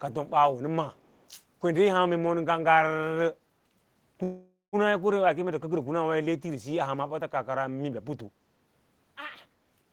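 Speech, with two faults. From 0.93 to 1.27 s a very faint copy trails the voice by about 307 ms. This echo leak likely comes from a far-end speakerphone whose echo canceller let some sound back. At 4.23 to 4.76 s a call audio freeze stretches the last sound into a fading fill, including about 180 ms of silence. Speech resumes where it stopped, nothing lost, about 494 ms later. Late packets likely emptied the jitter buffer.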